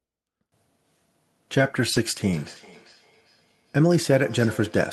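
At 1.57 to 1.59 s there is a lost packet rebuilt from error correction. The 20 ms that never arrived was replaced by the low-bitrate copy carried in the following packet, so there is no dropout, only a brief roughness and added noise. The waveform shows no break.

From 1.93 to 1.97 s there is short concealed packet loss. For 20 ms the receiver had nothing and extended the preceding sound, then crossfaded back, which gives a quick smear or wobble. In the same window, 1.95 to 1.97 s, another lost packet was rebuilt from error correction, adding a moment of grainy texture. On a spectrogram the harmonics look frozen or blurred for about a frame instead of moving naturally.

From 2.33 s to the end there is feedback echo between two devices. A second device in the same room plays the call back into a microphone whose canceller does not cover it, so the sound returns roughly every 0.4 s at about 21 dB below the direct speech, each repeat thinner and more ringing. 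A spectrogram shows faint, evenly spaced ghost copies trailing each phrase. The waveform carries low-level repeated envelopes.

Across the clip, the Opus call path leaves its normal coding texture, with spectral energy stopping near 12 kHz, which fits a 12 kHz bandwidth setting.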